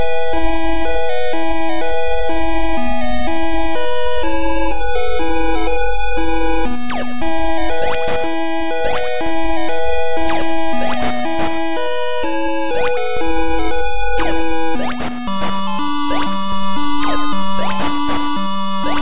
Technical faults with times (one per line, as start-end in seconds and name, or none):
none